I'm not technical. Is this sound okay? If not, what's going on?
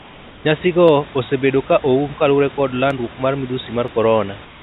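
No. There are two kinds of problem in this speech.

Comfort noise in place of the background: from the start to 0.45 s, and again from 4.45 s to the end, the natural hiss of the room is swapped for a flat, even noise that is slightly quieter. The call likely stopped sending sound during those pauses, and the receiving end filled them with made-up noise. Unlike a real gap, it never goes silent. It just sounds smoother and emptier than the room.

Dropped samples: there are single sharp clicks at 0.88 s, 2.91 s and 3.88 s. Each is a tiny missing sliver of sound, a fraction of a millisecond, so the sound jumps and snaps instead of cutting out. The likely cause is a few samples going missing in transit. Because nothing audible is lost, these differ from a dropout, which leaves a hole. You hear a tick, not a gap. The dull, phone-like sound, with nothing above 4 kHz, comes from the call line itself.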